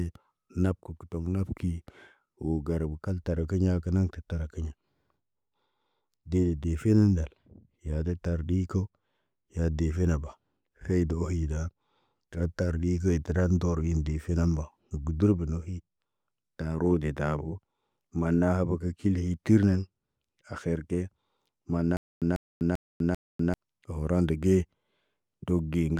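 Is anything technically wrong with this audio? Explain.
Yes, there's a stutter with silent gaps from about 21.97 to 23.54 s. A short burst of the speech, roughly 145 ms long, plays four times over at a steady pace, each repeat followed by about 248 ms of dead digital silence, so it ticks along once every 392 ms or so. The likely cause is a stalled player or stream replaying its last fragment on each retry and then running dry, so whatever belonged in that stretch never gets heard.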